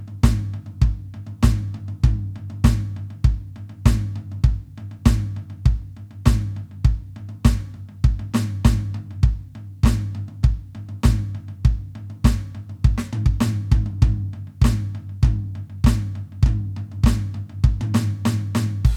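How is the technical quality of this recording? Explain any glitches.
The technical quality of this music recording is sound, with no glitches to explain.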